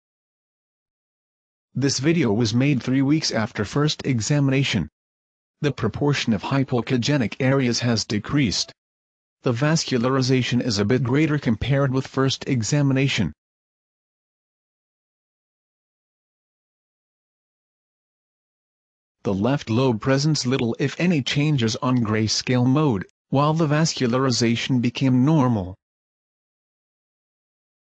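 Listening closely, nothing in the audio stood out as a technical fault at any point.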